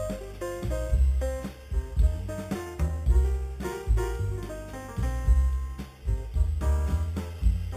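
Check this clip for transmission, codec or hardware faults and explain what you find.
One fault runs throughout: imaging from sample-and-hold upsampling. Each sample was repeated with no smoothing filter, which points to 8 kHz material raised to 44.1 kHz. Mirrored spectral copies fill 4 to 8 kHz at about 28 dB below the signal, adding a bright metallic fizz that rises and falls with the sound.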